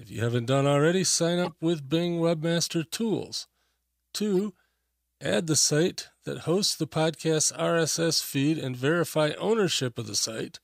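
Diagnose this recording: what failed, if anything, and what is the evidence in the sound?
Codec stage: a corrupt frame decoded. Flipped bits gave the decoder wrong gains and codes, putting energy at wrong frequencies. An error at 1.45 to 1.52 s, after "haven't done already sign", peaks about -20 dBFS. A fainter error at 4.33 to 4.40 s reaches about -35 dBFS.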